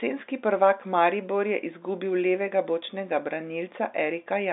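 No technical faults can be heard in this speech.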